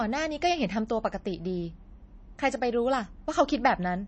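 Throughout the speech, nothing is present above 8.3 kHz, and weak detail flickers in and out with a watery, swirly quality, smearing consonant attacks. This is likely MP3 compression at a low bitrate, consistent with about 32 kbps, discarding treble and quiet spectral lines.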